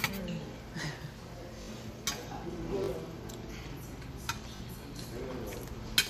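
At 1.62 s, 2.84 s and 4.56 s the sound catches in a brief buzzing stutter. Each is a repeated buffer: new audio arrived late, so the last short block, which fits a 20 ms buffer, played again with hard joins. This happens three times at the first event and twice at the others, skipping roughly 70 ms and then 40 ms of sound.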